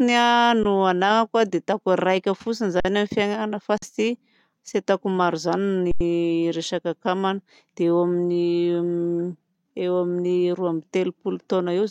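The speech freezes into brief flat dropouts: a very short one at 0.64 s (about 16 ms), then 2.80 to 2.85 s and 3.78 to 3.82 s (each about 46 ms), and a longer 5.91 to 6.01 s (about 93 ms). Each is an underrun with held sample. The output buffer ran dry and the converter held its last value. Playback resumes where it stopped, so the edges are soft. The two middle gaps are 2048 samples each and the last is 4096.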